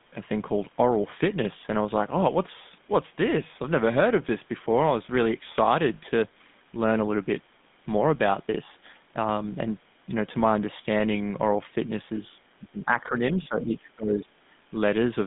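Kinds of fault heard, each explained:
GSM full-rate codec: Throughout, the sound has the coarse, buzzy grain of this early mobile codec, which rebuilds speech from a vocal-tract model driven by a sparse pulse train, consistent with the 13 kbps full-rate coder. The line band runs roughly 150 Hz to 3.6 kHz. A spectrogram shows a hard ceiling with nothing above 3.8 kHz, and harmonics look smeared and grainy rather than cleanly striped.
Speech suppressed in double talk: From 12.59 to 14.32 s the talker's level sags and breaks up, most likely because the echo canceller heard both ends at once and turned everything down. The deepest dips are about 20 dB, and around a second and a half of that stretch is affected. On the waveform the envelope shows sudden notches and thinned sections, and on a spectrogram the upper harmonics fade in patches.
Other side's voice leaking through: Between 13.43 and 13.48 s a brief, faint scrap of a second voice slips in, likely far-end loudspeaker sound that the echo canceller did not fully remove. 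It sits about 20 dB below the talker and lasts only about 50 ms. On a spectrogram it appears as a short, weak smudge of unrelated harmonic energy beneath the main voice, and it is barely visible on the waveform.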